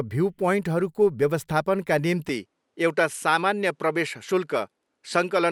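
At 2.29 s the speech turns slightly duller and stays that way to the end, with no gap and no level jump. It is likely an input switched to a poorer device. On a spectrogram the energy stops at 11.8 kHz, over a faint new noise floor about 55 dB down.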